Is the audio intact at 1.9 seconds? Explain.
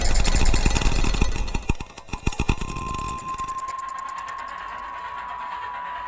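No. At 1.9 s the audio falls inside a span from 1.74 to 5.18 s affected by a resampler restarted on every block. Each block of about 10 ms was converted in isolation during a 24 kHz to 16 kHz conversion, so the filter lacked the real neighbouring samples at every block boundary and left a small error there. Those errors repeat at 100 Hz and are heard as a steady buzz riding on the sound wherever signal is present.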